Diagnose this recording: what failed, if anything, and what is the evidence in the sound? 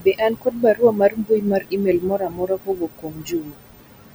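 Noise suppressor artifacts, from call processing: throughout, the leftover room noise (about 12 dB below speech) pumps, sinking between phrases. Unlike codec artefacts, this pumping tracks the noise floor.

Speech cut by the noise suppressor, from 0.0 to 4.14 s: about three seconds of quiet speech sink by up to about 20 dB, fading rather than cutting off as a dropout would.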